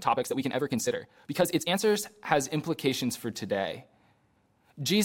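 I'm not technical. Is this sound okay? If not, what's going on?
No. From the start to 1.8 s, the speech has a time-stretched section. It runs about 1.66 times too fast, yet the pitch stays normal. It sounds rushed. Software likely squeezed it by dropping tiny slices to fit a length.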